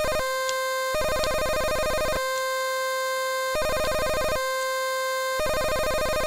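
No technical faults can be heard anywhere in the audio; the signal stays continuous and steady throughout.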